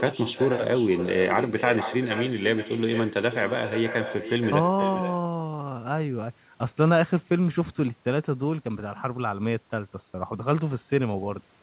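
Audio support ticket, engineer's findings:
Echo with no canceller, throughout. Every phrase is trailed roughly half a second later by a quieter, thinner copy, about 9 dB below the direct speech. Probable component: far-end acoustic echo cancellation missing. Far loudspeaker output leaks into far microphone, and the round trip through the network returns the talker's own speech. Both copies stop at 4 kHz, consistent with a G.711 A-law narrowband path.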